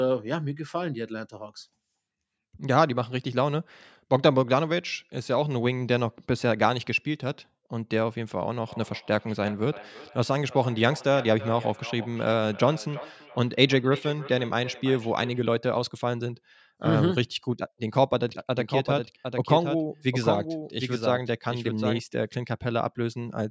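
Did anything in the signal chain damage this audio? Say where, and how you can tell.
Yes. From 8.62 to 15.48 s there is feedback echo between two devices. The speech comes back about every 0.3 s, thinner and more ringing each pass, peaking about 16 dB below the direct sound. A second device on the call replays this microphone's signal, which gets recaptured, and the local canceller cannot remove it.

Between 18.29 and 21.99 s there is a doubled audio track: a full-band copy roughly 0.7 s late, about 5 dB down, with no decay or room colour and abrupt entry and exit. Two out-of-step copies were mixed, likely from a slower second capture path or an edit.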